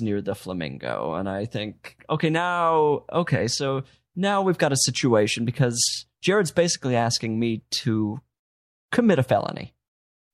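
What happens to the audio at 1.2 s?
Nothing goes wrong at 1.2 s; the speech carries on intact through that moment, with no dropout, click, glitch or other fault.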